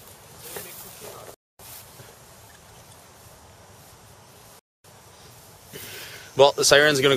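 At 1.34 to 1.59 s and again at 4.59 to 4.84 s, the sound drops out for 250 ms: a gap between chunks. The audio is carried in 3.0 s chunks, with silence inserted at each join, so nothing is lost but playback is interrupted.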